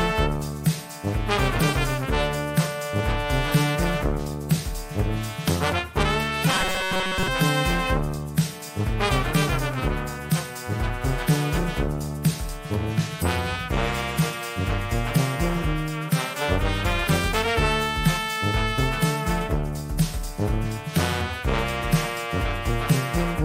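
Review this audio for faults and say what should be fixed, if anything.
From 6.50 to 7.28 s the sound becomes a rigid, metallic buzz at 188 Hz. This is robotic sound from repeated short buffers. Audio likely arrived too seldom, so a 5.3 ms chunk looped over most of that stretch. Deliver input steadily and enlarge the playback buffer.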